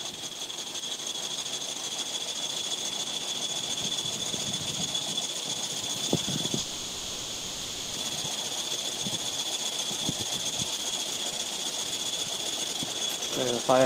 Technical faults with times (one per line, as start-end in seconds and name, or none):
6.59-7.95 call audio freeze
12.66-13.84 jitter buffer speed-up